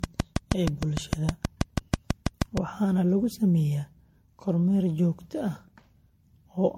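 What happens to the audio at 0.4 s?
A train of clicks runs from 0.04 to 2.58 s, ending just before "waxaana lagu sameeyaa kormeer". Similar pulses tick regularly, about 6.3 per second, roughly 20 dB above the speech. Likely cause: interference or a faulty connection.

Generation loss also colours this moment. The speech sounds swirly and hollow, with blurred attacks and nothing above 16.5 kHz. This likely comes from about seven MP3 passes at 64 kbit/s.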